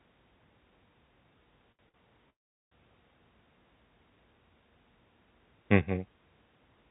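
At 1.72 s and again at 1.89 s there are short stalls from a late packet: the jitter buffer ran dry, so the last sound is stretched by about 70 ms and then 50 ms before playback resumes with nothing lost. From 2.30 to 2.73 s a call audio freeze holds the audio for about 0.42 s, most of it dead silence. The likely cause is packets held up in transit, after which the sound continues from where it stopped. Throughout, the audio has nothing above 4 kHz, which fits a G.711 narrowband call path.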